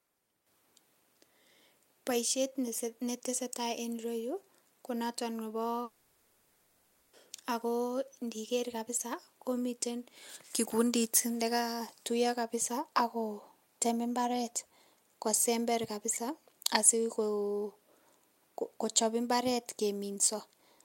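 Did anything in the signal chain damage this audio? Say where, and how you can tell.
Yes, a long network dropout hits the speech from 5.83 to 7.15 s. For about 1.3 s the last sound is stretched into a fading buzz with no true silence, and speech resumes with that stretch missing, likely from packets lost in transit.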